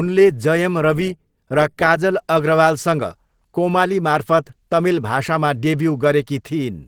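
From start to finish the speech sounds hoarse and muffled, with a rough, grainy edge, though content still reaches about 20.2 kHz. This is likely Opus compression in its hybrid speech mode, starved of bits at a rate that fits roughly 16 kbps.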